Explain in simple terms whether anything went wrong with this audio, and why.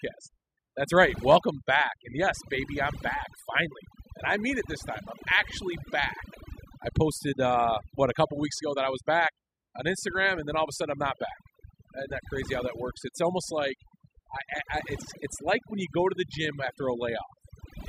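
Throughout the recording, the gaps between phrases drop to near silence sprinkled with twinkling specks. This is overdone noise removal. A noise reduction tool was set too aggressively on a noisy recording, so it shut down individual frequency bands whenever they came close to what it judged to be background noise. The softer parts of the voice resembled that noise and were stripped out along with it.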